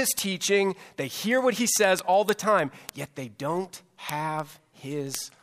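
From 0.11 to 5.37 s, word clock ticks recur about every 0.07 s: an unlocked clock roughly 300 ppm off slips one sample, showing as thin vertical spectrogram lines and single-sample waveform spikes.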